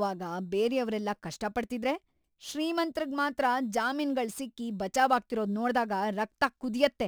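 From start to finish, a gritty, inharmonic fizz rides on top of the speech, growing on louder and brighter syllables and sitting roughly 30 dB below the voice. It comes from crude rate conversion. The sound points to a 48 kHz source moved to 44.1 kHz by keeping the nearest existing sample, so samples were dropped in a repeating pattern with no filtering. That timing error adds tones unrelated to the voice.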